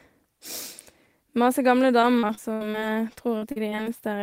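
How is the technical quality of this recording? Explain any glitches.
The recording has one stretch of trouble, from 2.01 to 3.88 s, where repeated packet loss (robotic sound) breaks up the speech. Over a dozen packets went missing or arrived late, the longest hole about 73 ms. Each gap was patched by stretching the preceding sound, covering roughly a fifth of that span, so the speech turns choppy, with pieces dropped out.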